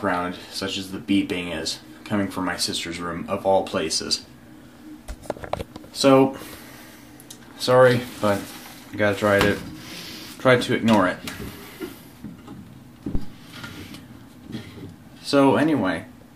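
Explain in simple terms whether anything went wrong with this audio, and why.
Something did go wrong, at about 13.15 seconds. A deep thump lasts until about 13.37 seconds, then dies away within about 50 milliseconds. This is a phantom power thump. Power to the microphone was switched while recording, sending a sudden jolt through the input.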